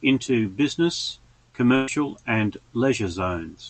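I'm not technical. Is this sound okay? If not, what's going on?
No. At about 1.75 to 1.90 s there's a burst of packet loss: roughly 0.12 s of the speech never arrived, so the call stretched the last sound into a fading buzz or hiss, then skipped ahead. It isn't a silent dropout because no silence is heard.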